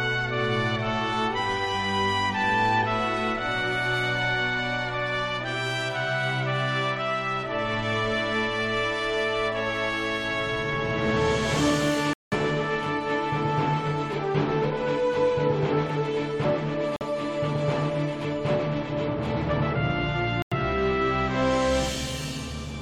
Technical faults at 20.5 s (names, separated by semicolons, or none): corrupt frame muted